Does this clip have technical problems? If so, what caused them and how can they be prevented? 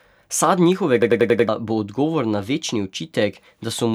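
Yes. A system hang loop runs from 1.02 to 1.49 s: the computer or driver stalled while the sound hardware kept replaying its ring buffer, so a 93 ms piece of speech repeats five times at 10.8 Hz, a machine-gun stutter consistent with a 4096-sample buffer, and about half a second of audio is lost. Preventing it means keeping the audio thread at real-time priority, avoiding blocking work in the audio callback, and using stable, up-to-date drivers.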